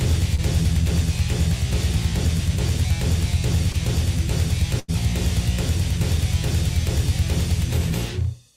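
A brief smear or wobble passes through the sound at 0.35 to 0.40 s and again at 3.72 to 3.76 s. These are short concealed packet loss: about 20 ms of audio missed the decoder each time, and the receiver extended the preceding sound for roughly 26 ms and 15 ms before blending back in.

From 4.80 to 4.90 s the sound becomes a held, fading continuation and then jumps ahead. This is a burst of packet loss. About 80 ms of audio never arrived in time, so the receiver stretched and faded the last sound across an 87 ms gap, and the audio in between is simply lost.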